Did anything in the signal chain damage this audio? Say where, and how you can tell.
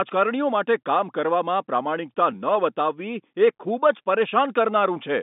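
No, nothing stood out on listening: the speech carries the narrow band of an ordinary G.711 telephone line, with nothing above about 3.8 kHz.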